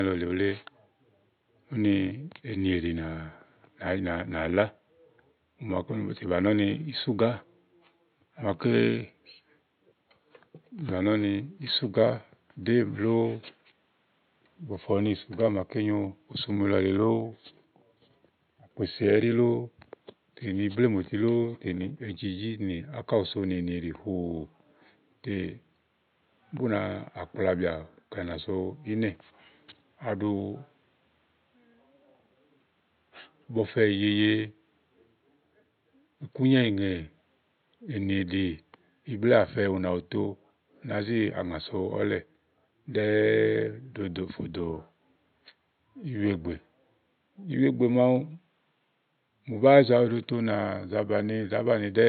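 No technical faults are audible.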